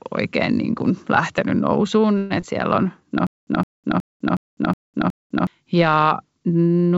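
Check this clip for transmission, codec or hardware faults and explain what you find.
Three transmission faults are audible in the speech, all between 2.18 s and 5.47 s. The band stopping at 8 kHz comes from the G.722 call codec at 64 kbps and is expected.

A call audio freeze runs from 2.18 to 2.32 s. It is likely caused by packets stalling in transit, which left the jitter buffer empty. For about 122 ms the receiver continued the last sound as a fading buzz or hiss rather than dropping to silence. When the packets resumed, the audio carried on from where it stopped, so nothing was lost, but everything after this point sits about 122 ms later. On a spectrogram the last spectral frame smears horizontally and decays. The waveform shows a smooth tail with no flat zero.

Short concealed packet loss follows at 2.40 to 2.43 s. About 40 ms of real audio never reached the decoder in time. The receiver covered only about 14 ms of that with extrapolated sound and then blended back into the real signal, taking up roughly 30 ms of the earlier delay. 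The result is a brief smear or wobble, and a quick consonant may drop out. The spectrogram shows a narrow blurred sliver. The waveform shows a slight discontinuity in the envelope.

A stutter with silent gaps covers 3.27 to 5.47 s. It is likely caused by the playback stalling and retrying. A 163 ms fragment plays six times, each followed by about 204 ms of digital silence, giving an even repeat every 367 ms. The speech that should have filled that stretch is gone. On a spectrogram identical blocks alternate with empty black columns. The waveform shows matching bursts separated by near-silent gaps.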